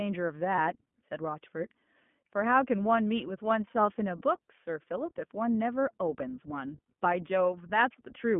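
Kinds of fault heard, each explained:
iLBC codec: Narrowband coding confines the sound to a telephone band near 150 Hz to 3.4 kHz, with plainly audible rough, synthetic grain from 20 ms frames.
Lost iLBC frames: One 20 ms frame drops out near 0.56 s. The decoder repeats the last pitch cycle, giving a brief buzzy held vowel that recovers immediately.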